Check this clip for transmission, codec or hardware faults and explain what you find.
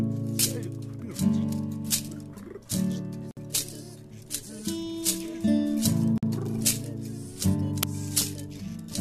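Three faults stand out in this music clip: two gaps where separately encoded pieces were joined, and one crack from an uninitialised buffer.

Gap at a join of encoded pieces, at 3.31 to 3.37 s (about 59 ms) and again at 6.18 to 6.23 s (about 49 ms). Each section was encoded on its own and spliced without removing the encoder's start-up delay or the padding on its final frame. That leftover silence drops out the music abruptly, with smeared edges, before it resumes where it left off.

Uninitialised buffer, at 7.83 s. The playback path sent out a block before any audio had been written into it, so stale memory contents were played as samples. The result is a loud crack lasting about 5.3 ms, a length that fits a 256-sample buffer, cutting sharply across the music.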